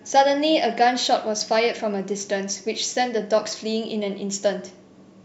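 From 0.11 s to 5.19 s, a faint, regular tick runs under the speech roughly every 70 ms. These are clock slip clicks, likely from two unsynchronised clocks drifting about 300 ppm apart, each slip dropping or repeating one sample.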